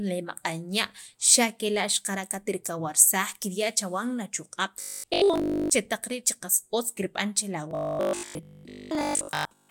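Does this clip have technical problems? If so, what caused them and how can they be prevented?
Yes. Audio was likely reaching playback too seldom, so the software filled the gaps by looping the last short stretch it had, which fits a 20 ms buffer, while most of the real audio was skipped. That repetition forces a fixed 50 Hz buzz onto the speech. The result is robotic sound from repeated short buffers from 4.82 to 5.70 s and again from 7.71 to 9.69 s, heard as a rigid, metallic drone. A larger jitter buffer and steady network or processing headroom would prevent it.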